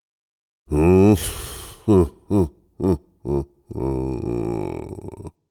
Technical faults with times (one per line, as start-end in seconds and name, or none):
none